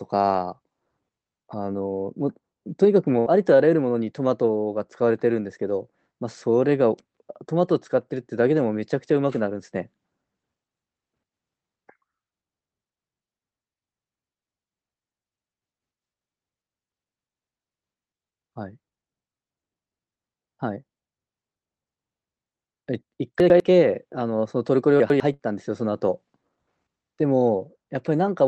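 At 3.19 s there is a burst of packet loss, running to 3.29 s. The receiver had nothing new to play. It stretched the last bit of speech for about 63 ms and let it fade. That gives a brief held buzz or hiss. The speech then picks up again with about 60 ms missing.

At 23.4 s come chunks out of order, through 23.6 s. Two 100 ms chunks swap places, one arriving a chunk late. Nothing is lost, but the order is wrong. There are three hard joins, and the speech sounds jumbled for a moment. The same fault returns at 25.0 s, again over 0.2 s with 100 ms chunks.

Right after, at 25.34 s, a second burst of packet loss runs to 25.42 s. About 57 ms of faded fill covers the gap. About 60 ms of speech is skipped. Through the call path, the Opus coding keeps the audio below 8 kHz.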